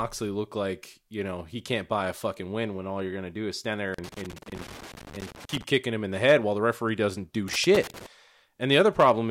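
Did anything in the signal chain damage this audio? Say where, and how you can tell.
Yes, in the analogue wiring: loose connector crackle appears twice, from 3.94 to 5.63 s, between "do is stand there" and "kicking him in the", and again from 7.48 to 8.06 s, just after "the referee doesn't do". A worn or dirty contact is making and breaking as it moves, chopping the speech into an irregular crackle. On a waveform this shows as ragged dropouts and spikes, and on a spectrogram as irregular broadband vertical streaks.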